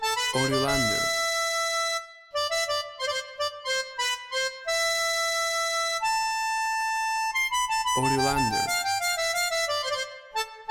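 Nothing stood out on listening; no technical problem could be heard anywhere in the clip.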